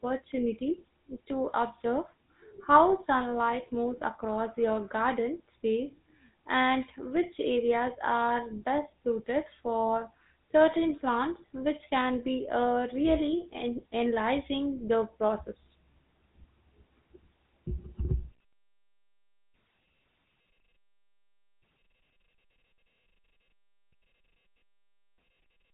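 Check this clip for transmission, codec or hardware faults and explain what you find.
There's one fault, and it runs the whole length of the speech. It's GSM full-rate codec damage, and it's plainly audible. The codec models the vocal tract and drives it with a coarse, regularly spaced pulse excitation that keeps only a fraction of the detail, which is consistent with 13 kbps full-rate coding. That thin excitation gives the voice a buzzy, gravelly roughness, and the band stops at about 3.8 kHz, so there's no air or sibilant sparkle on top.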